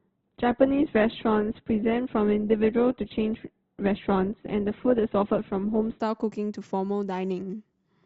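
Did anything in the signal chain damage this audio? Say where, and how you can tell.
Yes. This is an adaptive stream starting at a low bitrate, a playback-stage fault. From 0.0 to 6.0 s nothing sits above 4.2 kHz and codec artefacts are stronger, which fits a stream near 12 kbit/s. At 6.0 s the quality jumps, with no gap, to fuller bandwidth.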